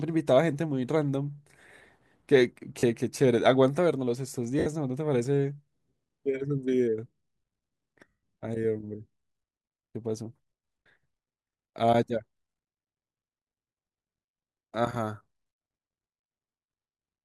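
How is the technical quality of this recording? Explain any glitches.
The recording has three short dropouts caused by lost LE Audio frames, at 2.79 to 2.83 s, 4.59 to 4.66 s and 8.08 to 8.23 s, lasting 40, 70 and 150 ms. When frames go missing, the LC3 decoder conceals the gap by repeating the last received spectrum with randomised phase signs and fading it out. The first two gaps are heard as a brief noisy smear over the speech. The 150 ms gap sounds hissy and dies away toward silence before the audio returns.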